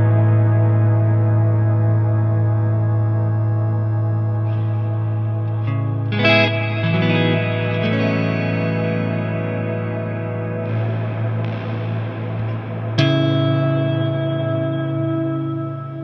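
No technical faults are audible.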